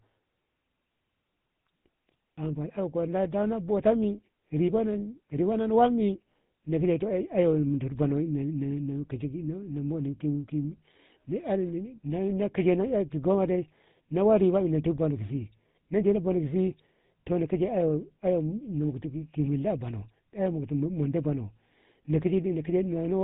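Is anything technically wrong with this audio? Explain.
Yes. Throughout the speech there is a buzzy, gravelly roughness with nothing above 4 kHz, the sound of the GSM full-rate codec, whose coarse pulse-driven vocal-tract model fits a 13 kbps stream.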